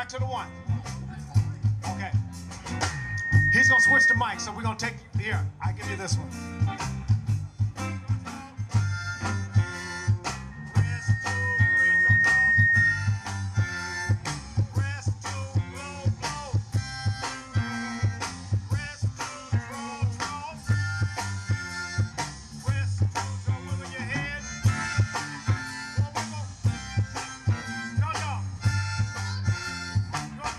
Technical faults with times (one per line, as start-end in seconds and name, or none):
2.70-4.26 loudspeaker feedback squeal
10.51-13.16 loudspeaker feedback squeal